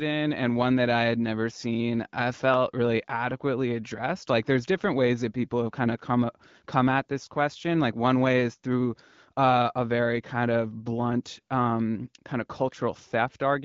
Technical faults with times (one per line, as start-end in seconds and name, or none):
none